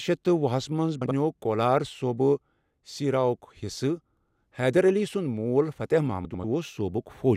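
At 1.01 to 1.11 s and again at 6.25 to 6.44 s the speech has frames out of order. Two adjacent runs of frames were swapped before decoding, so each stretch plays its second half first. The first swap exchanges blocks of about 48 ms, consistent with two frames each. The second exchanges blocks of about 96 ms, consistent with four frames each. Both sound like a brief garbled flutter. The clip's overall timing is unchanged.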